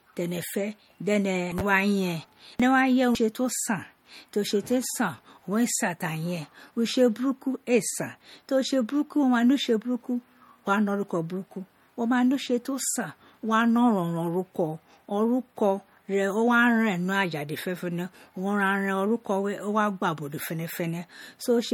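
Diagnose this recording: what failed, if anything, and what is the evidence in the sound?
The codec stage shows MP3 compression damage throughout the speech: nothing above 17.9 kHz, and a plainly audible watery, swirling texture on sibilants. A plain low-pass filter would dull the top without that flickering, which likely comes from a starved encoder, fitting roughly 48 kbps.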